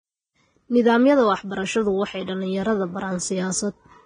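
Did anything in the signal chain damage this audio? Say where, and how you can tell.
Yes, at the codec stage. The speech sounds hissy and grainy throughout, with nothing above 9.7 kHz. Heavy Vorbis compression at about 20 kbps is the likely cause.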